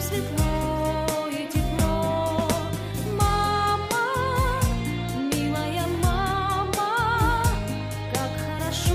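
Nothing in this recording stands out as a technical fault at any point, so there's nothing to flag here.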